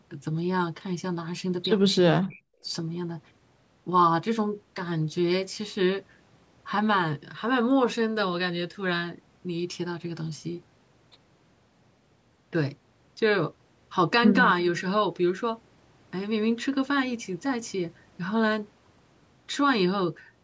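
It's a speech clip, and from 2.19 to 2.65 s the talker drops sharply, by roughly 40 dB at the deepest point. That looks like speech suppressed in double talk, most likely an echo canceller ducking the near side while the far end spoke over it. The call processing leaves nothing above 8 kHz.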